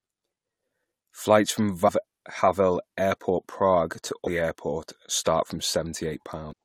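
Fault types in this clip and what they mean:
Damaged data in a compressed stream: corrupted frames make the decoder lose sync, giving brief glitches near 1.87, 4.26 and 6.51 s, seen as short disruptions on the spectrogram.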